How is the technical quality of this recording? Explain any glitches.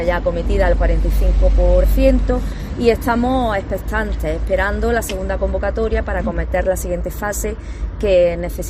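No glitches or dropouts to report; the signal holds steady throughout with nothing that needs explaining.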